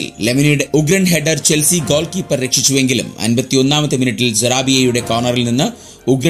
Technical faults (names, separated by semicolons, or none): none